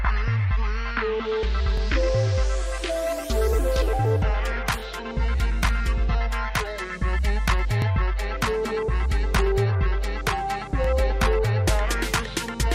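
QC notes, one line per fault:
1.78, 4.80, 7.82, 10.84 s, overlapping chunks: each 3.0 s block begins before the previous one ends, so about 23 ms of audio plays twice at every join. The repeated slice is heard as a brief stutter or click, recurring at regular intervals.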